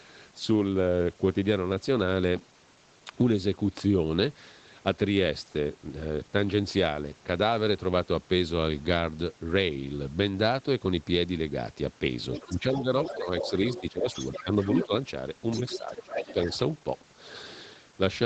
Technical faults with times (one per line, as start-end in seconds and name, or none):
12.33-14.86 other side's voice leaking through
12.53-14.08 speech suppressed in double talk
14.43-14.53 speech suppressed in double talk
14.85-14.92 speech suppressed in double talk
15.52-16.58 other side's voice leaking through
15.78-16.38 speech suppressed in double talk